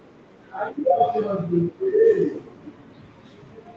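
Echo leak at 2.31 to 2.49 s and again at 3.02 to 3.21 s: a faint copy of the speech returns about 0.4 s late, roughly 20 dB under it the first time and about 40 dB under it the second, likely from a loudspeaker whose echo canceller let it through.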